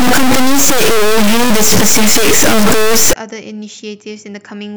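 From the start to 3.13 s, the speech carries harsh, buzzy distortion. Pauses fill with loud noise, with steps of roughly -5 dBFS. The likely cause is a stuck bit: one high data bit held fixed, pushing about half the samples off by its weight.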